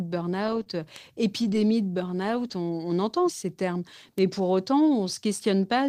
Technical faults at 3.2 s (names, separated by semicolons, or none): none